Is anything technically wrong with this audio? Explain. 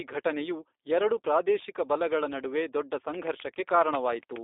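Yes. G.729 codec coding runs through the whole speech clip, with nothing above 3.7 kHz or below about 300 Hz. The codec resynthesises speech from a vocal tract filter, pitch predictor and sparse pulses, which fits 8 kbit/s G.729A, leaving a plainly rough, slightly synthetic, buzzy quality.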